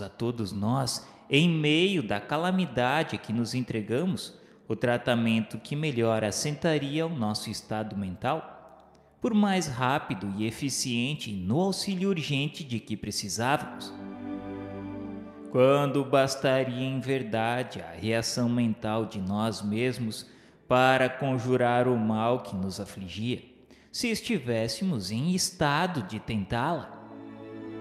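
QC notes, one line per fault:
No faults found on this pass; nothing to log.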